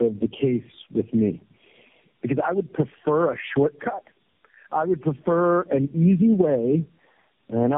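Gain pumping runs through the whole speech clip. The gain swings by around ten decibels. Loud and soft parts sit close together and sound squashed. A fast limiter working on far too much gain is the likely cause.

Tandem speech coding is also present throughout. The speech sounds like it was decoded and re-encoded through about four low-rate speech coders in a row. Each pass degraded the last one's output. The result is rough, warbly and muffled, with nothing above 3.7 kHz.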